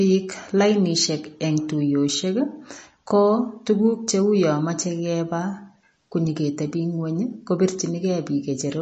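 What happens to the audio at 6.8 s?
At 6.8 s the speech is watery, as throughout the clip. The likely cause is MP3 compression, consistent with about 32 kbps, zeroing weak frequency lines.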